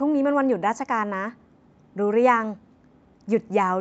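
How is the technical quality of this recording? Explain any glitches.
No glitches turn up anywhere in this one; it's speech as it sounds after an ordinary call, with the top end stopping at 8 kHz, which is just how the call's microphone processing and codec shape it.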